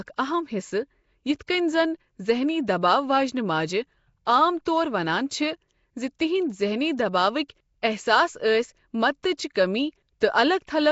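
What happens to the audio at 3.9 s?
At 3.9 s the speech carries a rough, hissy halo and smeared, underwater quality with nothing above 7.7 kHz, present throughout and likely Nellymoser compression filling weak bands with noise.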